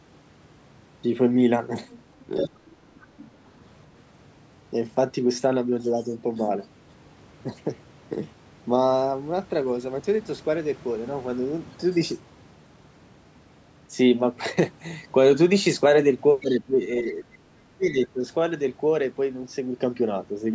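Speech recording, band-limited to 8 kHz by the call's microphone processing, with two distinct faults. The other side's voice leaking through appears in brief scraps from 1.89 to 2.02 s (faint, about 25 dB below the talker), 2.23 to 2.48 s (prominent, only about 10 dB down) and 3.01 to 3.06 s (barely audible). The likely cause is loudspeaker playback reaching the microphone and not being fully cancelled. Speech suppressed in double talk follows the same pattern. The talker's level dips slightly, by around 5 dB, from 2.27 to 2.5 s, overlapping the strongest leak. It then drops more heavily, by roughly 15 dB, from 16.41 to 17.27 s and by roughly 25 dB from 17.7 to 18.23 s. This is likely the echo canceller attenuating everything while both ends talk at once.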